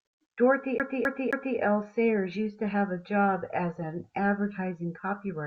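CD stuck on one turn, from 0.78 to 1.58 s: a scratch keeps throwing the laser back one track, so the same 264 ms of speech plays three times, each pass cut off by a brief mute, giving the quick, evenly spaced stutter of a skipping disc.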